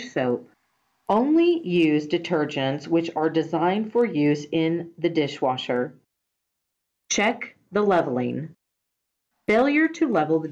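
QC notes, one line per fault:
No faults found in this clip.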